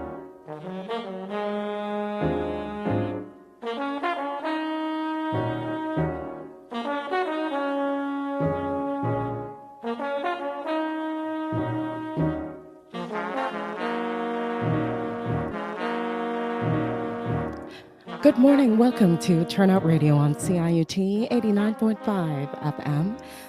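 At 15.51 s the audio jumps back and replays the same two seconds, running to 17.51 s, with a small blip at the join. This is a stream segment repeated: the player fetched or queued one segment twice, adding 2 s.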